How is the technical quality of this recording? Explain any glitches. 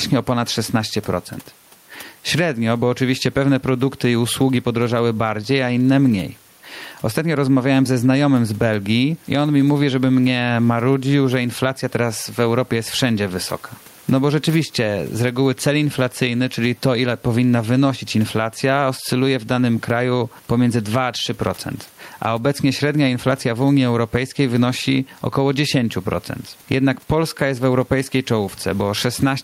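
The recording has one fault, gain pumping, present throughout the speech. The level is audibly worked over by fast gain control rather than left steady.

Gain pumping runs for the whole clip. The likely cause is an input gain set far too high, with a fast limiter or compressor pulling it back by around 10 dB on each loud syllable. The room noise sits about 38 dB below the speech, and the speech sounds squashed, with loud and soft parts pressed close together.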